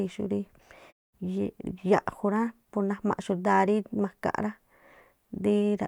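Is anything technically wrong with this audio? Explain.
No, nothing technically wrong can be heard here.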